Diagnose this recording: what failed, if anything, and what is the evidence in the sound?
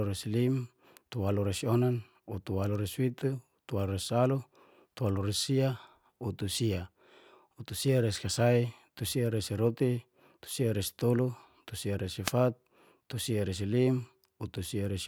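The failure is in the analogue stage, on the radio link of a wireless microphone before the converter. A wireless microphone noise hit at 12.24 s lasts about 90 ms, to 12.33 s, and is heard as a brief swish of static over the speech. Reflected radio paths cancel the FM carrier, so receiver noise rises, and in a deep fade it breaks into clicks. A spectrogram shows a short broadband hiss column, and the waveform shows a noise burst.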